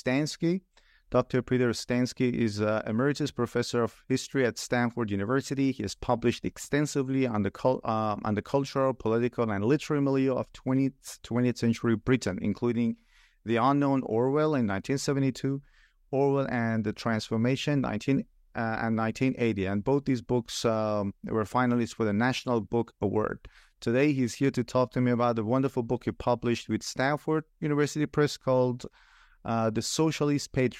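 Nothing goes wrong anywhere in this bit of speech, so there's no technical fault to point to at any moment.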